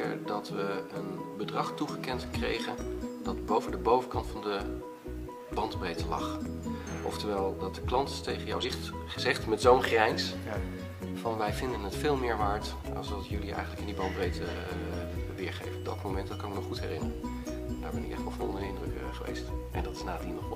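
Three brief bursts of damaged data in a compressed stream occur at 3.53–3.60 s, 8.60–8.65 s and 18.86–18.91 s, each a 50–62 ms glitch where the decoder misreads corrupted frames and resynchronises.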